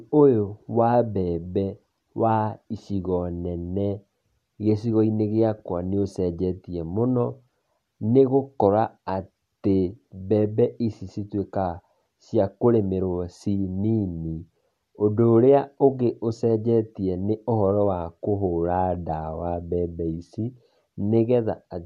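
A speech recording with nothing technically wrong that can be heard.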